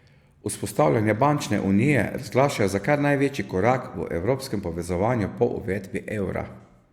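Nothing technical goes wrong anywhere in this bit of speech, so there's no fault to point to.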